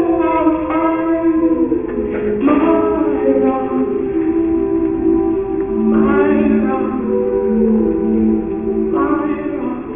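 Aliasing runs through the whole sound. Unfiltered downsampling, which fits a drop to 6 kHz, folds content above 3 kHz back as gritty, unrelated tones rather than the clean dullness of plain band-limiting.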